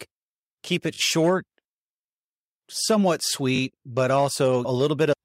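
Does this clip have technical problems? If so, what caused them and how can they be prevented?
Yes. Just after "keep it", at 0.94 to 0.98 s, a brief buzzy stutter sounds as one tiny slice plays twice more with hard joins. This is a repeated buffer: new audio arrived late, so the device replayed its last block, which fits a 20 ms buffer. A larger buffer or higher-priority audio thread prevents this.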